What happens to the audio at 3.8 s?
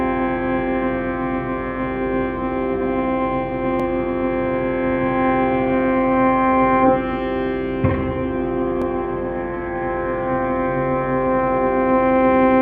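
At 3.80 to 3.82 s there is an overlapping chunks fault. The audio was handled in chunks of 5.0 s, and the next chunk began before the previous one had finished. So 20 ms of sound plays twice at the join. That repeated sliver breaks the flow of the audio for an instant. It comes across as a brief click or stutter at that point.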